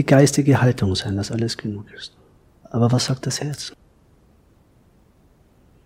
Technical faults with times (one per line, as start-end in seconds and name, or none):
none